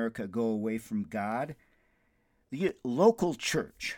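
CD scratch ticks run from 1.32 s to 3.27 s: eleven regular clicks, about five per second, each lasting only a few milliseconds. A scratch destroys more data than error correction can rebuild once per disc revolution, so the player patches or mutes those samples in the speech.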